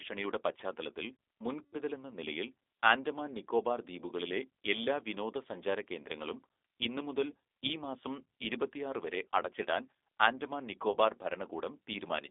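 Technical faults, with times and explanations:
Throughout, G.729 codec: The sound is confined to a narrow telephone band, from about 300 Hz to 3.6 kHz, which fits an 8 kbit/s G.729A stream. Nothing above that band survives, so the speech sounds thin and muffled. The codec rebuilds each short frame from a vocal tract filter, a pitch predictor and a few pulses. That coarse modelling leaves an audible roughness and a slightly synthetic texture on the speech.
1.63 to 1.75 s and 10.92 to 10.97 s, VoIP packet loss concealed by the speech codec: About 100 ms of audio goes missing in the first gap and about 20 ms in the second. This fits five lost packets and then one. The decoder fills each hole by repeating its last pitch and filter at falling gain. The speech smears into a fading buzzy tone or coloured noise. It stays weak and distorted briefly after real audio returns, because each frame builds on the last.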